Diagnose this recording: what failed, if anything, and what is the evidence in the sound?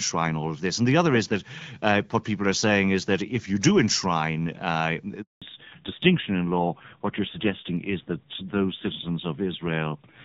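The network stage failed during a handover gap. At 5.22 s the speech cuts off and stays silent until 5.42 s, a 200 ms hole. The sound does not fade slowly. It stops almost at once. That points to the call switching between networks while no speech frames arrived. Nothing was there for the decoder to play, so whatever was said in those 200 ms is gone.

Right after the gap, at 5.42 s, there is a fallback to narrowband that lasts to the end. Before it, the wideband HD Voice codec carries light coding damage, and the upper range is present. After it, nothing above 4 kHz remains. The speech turns dull, muffled and somewhat rough. The new link appears to use a narrowband AMR codec at a low rate, likely around 5.9 kbit/s given the coarseness.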